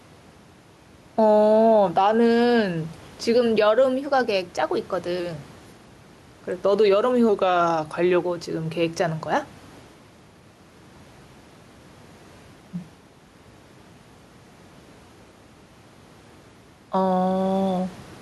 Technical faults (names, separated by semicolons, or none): gain pumping